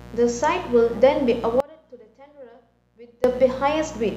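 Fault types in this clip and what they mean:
mains buzz: a raspy 60 Hz buzz with harmonics reaching into the kilohertz range, present throughout at about 20 dB below the speech, harsher than smooth hum.
audio dropout to a faint residue: from 1.60 to 3.24 s the speech cuts abruptly to a faint leak about 25 dB down, likely a broken feed, unlike a fade.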